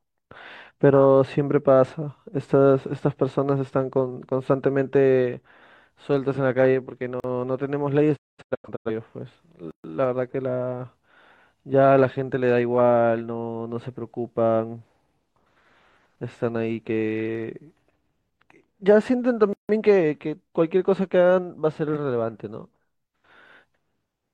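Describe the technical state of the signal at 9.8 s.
At 9.8 s the speech falls into a block of digital silence running from 9.71 s to 9.84 s, a gap of about 131 ms. Here the sound drops straight to silence and then returns, with no fade on either side. A stretch this long comes across as a short hole in the speech rather than a tick. It fits output that was not delivered in time, so zeros were played in its place.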